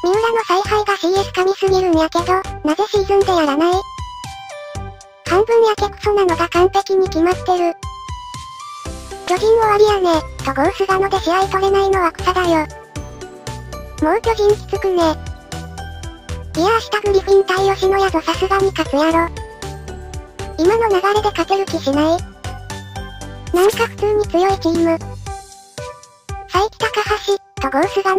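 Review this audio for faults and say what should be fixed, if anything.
Corrupt frames get decoded at 10.20, 15.36, 21.53 and 24.73–24.75 s: flipped bits played anyway, giving brief chirps, the last two loudest. Checksumming frames so damaged ones are concealed instead would fix it.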